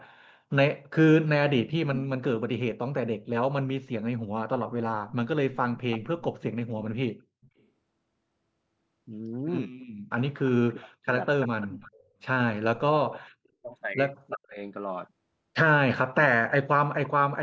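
From 0.0 to 2.05 s, and again from 5.08 to 17.09 s, a delayed copy of the speech trails the original by about 365 ms and then 335 ms, roughly 10 and 15 dB down. This is echo leak, likely from a loudspeaker whose echo canceller let part of its pickup through. Unlike a room reflection, it repeats the speech late.

Around 6.4 s the speech briefly dips, and between 10.7 and 14.6 s it is pulled down in pieces, by as much as 40 dB over about a second in total. This is speech suppressed in double talk, likely an echo canceller turning down its own talker along with the echo while they overlapped. Sound is taken away here rather than added, which separates it from the echo.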